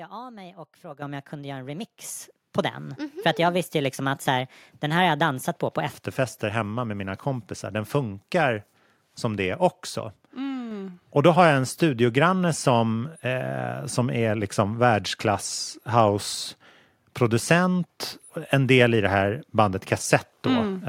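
From the start to 5.9 s, the speech runs at 1.23 times its recorded rate, a section at the wrong speed. Pitch and tempo rise together, lifting the voice by roughly four semitones so it sounds thin and hurried until normal speed returns at 5.9 s. The likely cause is that this stretch was played or resampled against the wrong clock, compressing its timeline.

Three times the microphone volume is stepped up: at 1.02 s by about 10 dB, at 2.04 s by about 6 dB, and at 10.71 s by about 3 dB. Each time the speech and the background noise jump in level together, in a single instant with no fade, because the input gain was raised in one step rather than ramped. The first two steps fall inside the sped-up section.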